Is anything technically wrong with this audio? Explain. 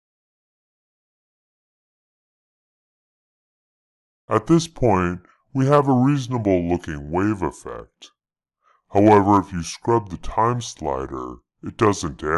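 Yes, there is a wrong sample rate throughout: it runs at about 0.73 times speed and 5.55 semitones low, which fits 44.1 kHz material played at 32 kHz. Everything sounds dragged and deep, and the spectrogram shows all content squeezed downward, with the waveform stretched in time.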